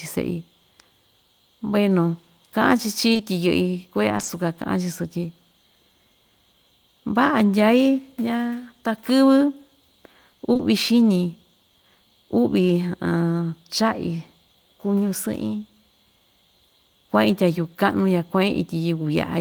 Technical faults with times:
3.13-3.21 short concealed packet loss
4.17-4.29 short concealed packet loss
10.53-10.61 short concealed packet loss

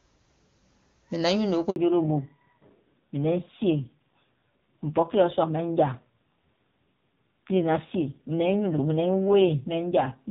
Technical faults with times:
1.70-1.76 handover gap
1.76-10.30 fallback to narrowband

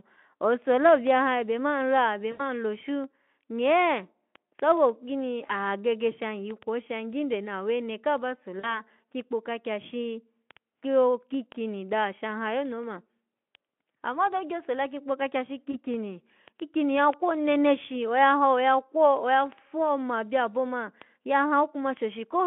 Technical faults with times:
2.31-2.42 VoIP packet loss concealed by the speech codec
5.47-5.59 VoIP packet loss concealed by the speech codec
8.59-8.81 VoIP packet loss concealed by the speech codec
15.71-15.77 VoIP packet loss concealed by the speech codec

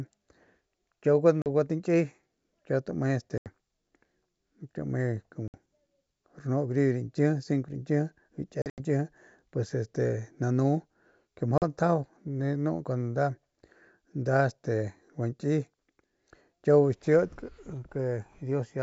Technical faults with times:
1.42-1.48 packet loss on an ADPCM call
3.38-3.48 packet loss on an ADPCM call
5.48-5.58 packet loss on an ADPCM call
8.62-8.80 packet loss on an ADPCM call
11.58-11.63 packet loss on an ADPCM call

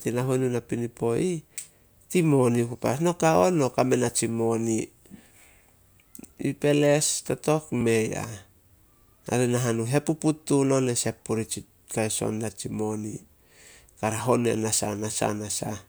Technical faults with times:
7.81 underrun with held sample

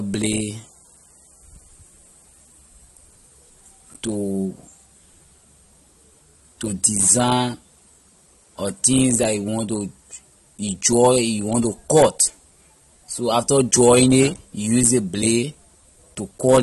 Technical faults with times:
0.00-16.62 AAC compression

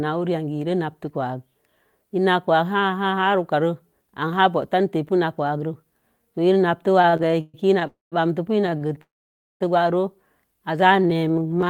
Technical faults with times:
7.01-7.83 repeated stalls (stutter)
7.87-8.14 call audio freeze
8.62-9.02 repeated stalls (stutter)
9.02-9.62 call audio freeze
10.81-11.55 jitter buffer slow-down
10.97-11.70 repeated stalls (stutter)

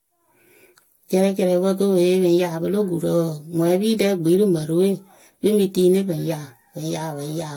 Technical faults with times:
0.00-7.56 generation loss

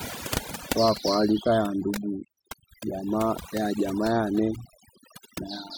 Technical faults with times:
0.00-5.77 overdone noise removal

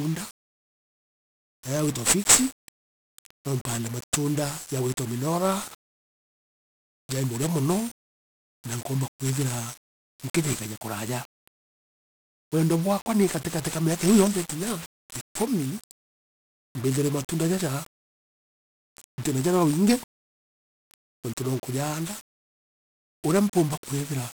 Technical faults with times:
0.00-24.39 1-bit DFPWM compression

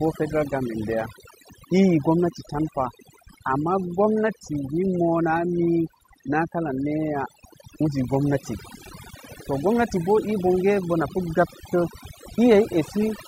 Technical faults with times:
0.00-13.28 overdone noise removal

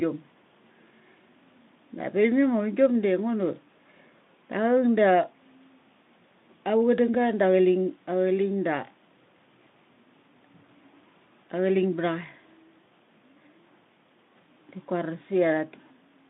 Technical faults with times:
none

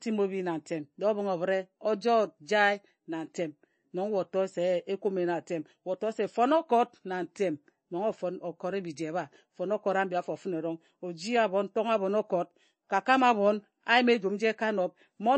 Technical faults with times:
0.00-15.37 MP3 compression

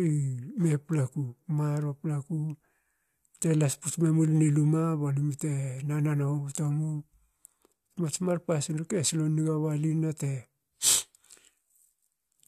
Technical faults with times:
none

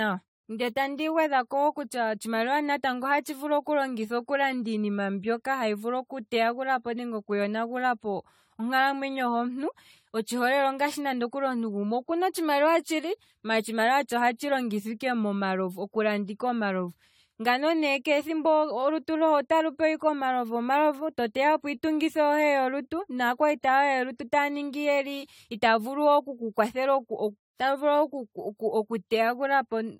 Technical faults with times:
0.00-30.00 generation loss

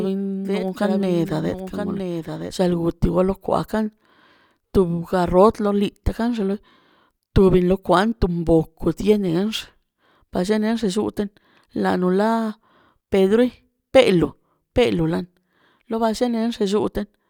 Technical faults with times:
0.00-2.90 doubled audio track

